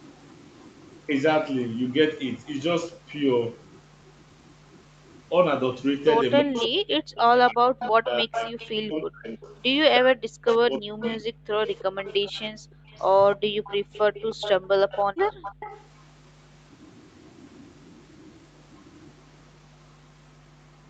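Right from the start, 0 to 1.06 s, there's a faint echo leak: a copy of the speech trailing by 315 ms at only about 35 dB under the talker. It's likely a far-end speakerphone whose echo canceller didn't fully scrub its mic pickup.

From 6.43 to 14.9 s the talker keeps ducking. That's speech suppressed in double talk, likely because the canceller couldn't separate the talker from the loudspeaker echo and turned both down. The drops reach around 40 dB, adding up to roughly four seconds of chopped, dipping speech.

Overlapping that, from 6.54 to 15.86 s, the echo leak returns much stronger, around 15 dB below the speech and still 315 ms late. It sounds like a doubled voice trailing behind through the Opus-coded call audio.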